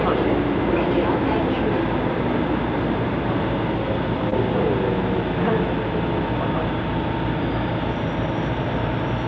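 A short recording of sounds that went through a call path, and the top end stops at 8 kHz, which fits a wideband codec like G.722 at 64 kbps. The one real fault is a short concealed packet loss at about 4.30 to 4.33 s. Roughly 20 ms of audio never arrived, and the receiver covered most of the gap by extending the sound just before it, then crossfaded back. What you hear is a quick smear or wobble right there.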